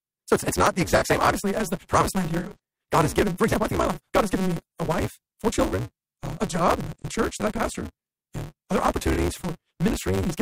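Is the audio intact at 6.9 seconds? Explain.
No. From 6.85 to 7.05 s there is AAC frame loss with concealment. Roughly 170 ms of coded frames are missing, with the longest gap about a tenth of a second. The decoder patches them from the last good spectrum, so the speech turns smeared, noisy or phasey rather than dropping out.

A block size mismatch (truncated) also runs through the whole clip, including this moment. Each block is cut short before the next stage reads it, consistent with a 256-sample read. This produces a steady 188 Hz buzz and makes speech play 1.88 times fast at roughly normal pitch.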